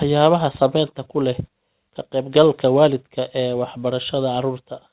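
Speech with no technical faults to point to. It has come over a working call path, and the band-limited sound with nothing above 4 kHz fits a narrowband codec such as G.711 mu-law at 64 kbps.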